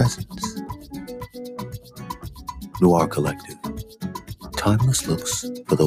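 Throughout the sound, sustained parts pump and thin out while attacks come through, with level swinging by around 10 dB: a speech-oriented noise suppressor applied to music or sounds is treating steady content as noise. Sharp single clicks at 0.69 s and 2.85 s are likely dropped samples, where a fraction of a millisecond is missing and the waveform jumps abruptly. Sound is cut by the noise suppressor at 1.78 to 2.02 s (about 9 dB down), 3.39 to 3.64 s (about 8 dB) and 3.85 to 4.49 s (about 11 dB), where held tones and decays sink as the suppressor pulls them down.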